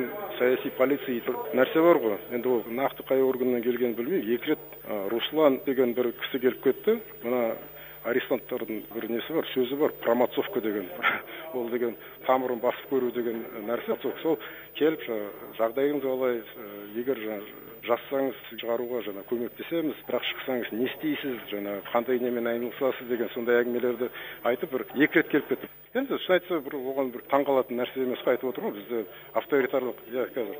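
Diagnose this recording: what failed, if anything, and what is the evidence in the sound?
Two brief glitches, at 13.91 to 13.93 s and at 18.58 s, point to damaged data in the compressed stream: corrupt bytes made the codec's decoder misread frames and resynchronise.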